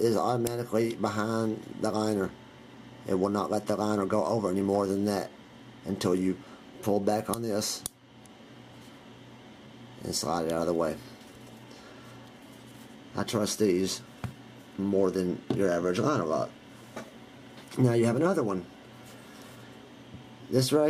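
The sender's audio clock runs roughly 4% slower than the receiver's, a clock drift between sender and receiver that persists for the whole clip. Because samples arrive more slowly than they are played out, the jitter buffer keeps sliding toward empty, and the receiver has to stretch what it holds to avoid running dry. The result is a sound whose timing never quite settles, with small hiccups scattered unevenly through it rather than at a steady rhythm.

From 0.30 s to 20.82 s the receiver makes repeated timing corrections, inserting short repeated pieces to make up for the slow sender. Every edit pushes in the same direction, so playback runs at about 96% of the original pace and the passage comes out around 0.7 s longer in total. Each individual correction is tiny and irregularly spaced. They are heard as faint stutters and a slightly dragging, unsteady tempo rather than as distinct breaks.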